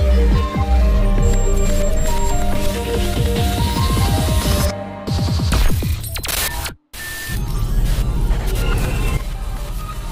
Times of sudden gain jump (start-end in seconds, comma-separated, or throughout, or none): 9.17-10.11